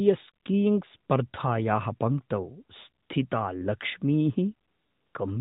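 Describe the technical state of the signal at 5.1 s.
At 5.1 s you're hearing AMR comfort noise, from 4.68 to 5.14 s: the phone stopped sending speech frames, so the receiver fills those 0.46 s with smooth synthetic hiss.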